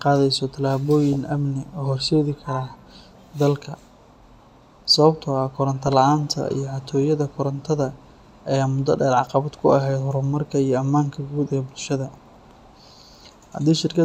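Three quick bursts of DAB burbling hit this speech: 1.13 to 1.16 s, just before "amni u horseedi", then 5.83 to 5.93 s and 13.75 to 13.80 s. Bit errors slipped past error correction into the MP2 data, so wrong samples put brief blips of noise in single sub-bands.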